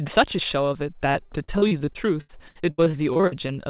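From 1.12 to 3.51 s, audio packets kept arriving late or not at all, producing repeated packet loss (robotic sound). About twenty holes open up, none longer than 80 ms. Each is patched by stretching the preceding sound, so roughly a quarter of that stretch is synthetic fill, giving choppy, robotic speech with fragments dropped. Throughout, the sound stops at 4 kHz, consistent with a narrowband call codec such as G.711.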